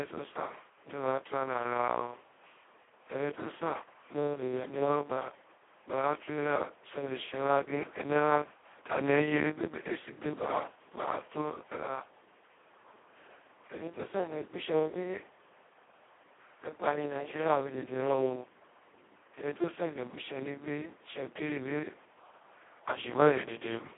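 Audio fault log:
throughout Speex codec: too few excitation bits leave speech hoarse and robotic, unlike plain telephone band-limiting; fits about 2 kbps, nothing above 3.8 kHz.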